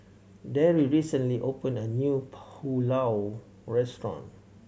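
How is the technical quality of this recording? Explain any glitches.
No glitches can be heard anywhere in this speech recording. There is nothing here that needs explaining.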